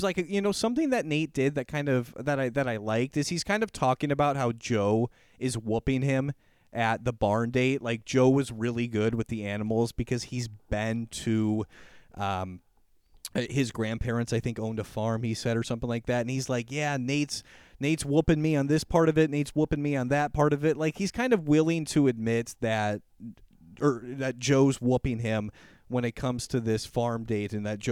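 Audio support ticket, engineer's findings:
No faults found in this speech clip; nothing to report for the ticket.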